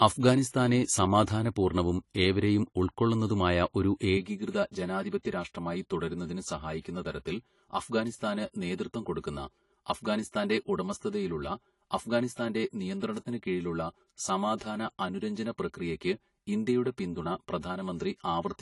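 From the very start the speech has the dull, smeared quality and warbling, fizzy sibilants of AAC compression, likely AAC-LC at a low bitrate, with damage that fits around 32 kbps and is plainly audible. Nothing is present above 11.4 kHz. A spectrogram would show an abrupt ceiling at that frequency, with patchy holes and blotchy, noise-filled bands below it where the codec has discarded or substituted detail.

Between 0.49 and 0.54 s, just before "സമാധാന പൂർണ്ണവും ഏവരെയും", there is pre-echo. The codec spread its quantisation noise across a whole block, so noise sized for the sharp onset also fills the quiet 46 ms ahead of it. It is heard as a brief hiss that anticipates the attack, which itself sounds softened. On a spectrogram it appears as a faint broadband smear leading into the onset. On a waveform it is low-level fuzz before the transient.

From 4.17 s to the end, channel delay (comb filtering) makes the sound hollow and phasey. 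One channel arrives roughly 5 ms late, and when the two channels are summed to mono, shared content cancels at evenly spaced frequencies. The first notch falls near 100 Hz, and further notches repeat about every 200 Hz above it. A spectrogram would show these as fixed dark horizontal stripes running steadily through the rest of the clip.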